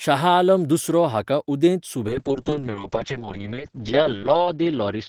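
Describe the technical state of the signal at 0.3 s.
At 0.3 s the speech signal is intact, with no dropout, clipping, distortion or other fault at that point.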